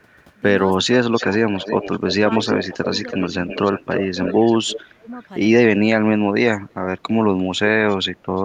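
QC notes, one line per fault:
0.77–1.47 s, 2.66–2.77 s, 3.99–5.08 s: speech suppressed in double talk. The talker dips by up to about 25 dB, about 10 dB and about 20 dB respectively, in fragments totalling roughly 0.3, 0.1 and 0.5 s respectively. This is likely an echo canceller that, with both sides talking, could not tell near speech from loudspeaker echo and attenuated everything.
1.14–4.81 s: echo leak. A delayed copy of the voice trails it by about 330 ms at about 10 dB below the speech, overlapping the dips above. This is likely a far-end loudspeaker pickup that the echo canceller failed to remove, so it was sent back.
5.22–5.28 s, 6.69–6.74 s, 7.58–7.96 s, 8.36–8.43 s: echo leak. Faint scraps of the delayed voice return at about 340–350 ms lag, some 30 to 40 dB down, as residual echo the canceller likely left unsuppressed.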